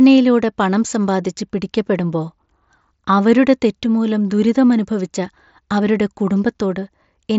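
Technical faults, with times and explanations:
Nothing's wrong with this one; it's just speech coming over a wideband Bluetooth headset link, with the band topping out around 8 kHz as that path does.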